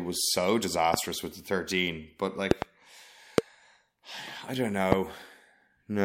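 A likely voltage step from a plug, switch, static or driver glitch adds loud pops to this speech, about 20 to 25 dB above it. Single pops fall at 0.94–0.96 s (before "with the thirteen"), 3.38–3.40 s and 4.92–4.95 s (after "I don't"), with a double pop at 2.51–2.64 s.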